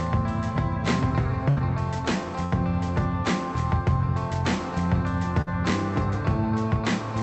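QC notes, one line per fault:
1.49–1.58 s, 2.46–2.54 s, 5.42–5.49 s: burst of packet loss. Three short dropouts occur, each under a tenth of a second. At each one, the last bit of sound is held and faded instead of going silent. The receiver is filling in for audio that never arrived, with about 71, 58 and 50 ms of fill. Playback then jumps ahead, skipping 80, 60 and 40 ms of the original. Through the call codec path, the top end stops near 8 kHz.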